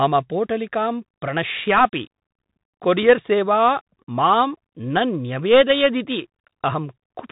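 From start to finish the speech carries Bluetooth CVSD headset codec damage, plainly audible: nothing passes above about 3.8 kHz, consistent with a 64 kbps one-bit delta stream whose adaptive step lags loud high sounds, so sibilants turn scratchy over granular hiss. A spectrogram shows a hard ceiling near 3.8 kHz.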